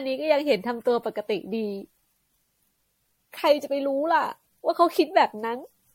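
From start to finish the speech sounds swirly, hollow and smeared, with blurred consonant attacks and nothing above 16.5 kHz. That's generation loss, likely from repeated MP3 encoding around 64 kbit/s, maybe seven passes, each re-quantising on a shifted frame grid.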